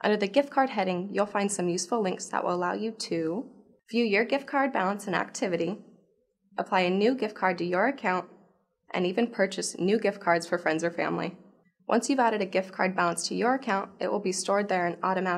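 No technical faults are audible.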